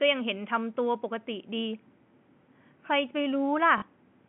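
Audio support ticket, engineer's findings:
Short robotic stutter at 3.78–3.82 s, about 40 ms. Packet loss with last packet repeated: the receiver looped stale audio. The length fits two lost 20 ms packets. Telephone band on the G.711 line.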